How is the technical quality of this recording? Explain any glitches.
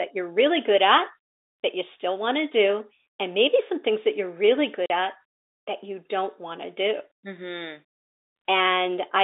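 The recording has one glitch: a short dropout partway through, heard over telephone-band audio carried by G.711 coding, which limits it to roughly 300 Hz to 3.7 kHz.

Packet loss filled with silence, 4.86 to 4.90 s: between "things that you're really" and "at that you don't", a stretch of the audio stream never arrived, and the receiver inserted digital silence instead of concealing the gap. The 40 ms hole fits two consecutive 20 ms packets going missing. Because the cut is abrupt, the speech drops out and resumes with sharp edges.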